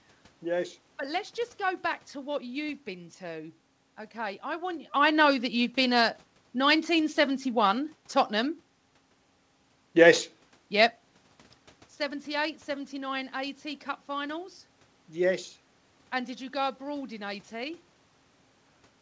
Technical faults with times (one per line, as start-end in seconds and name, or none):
none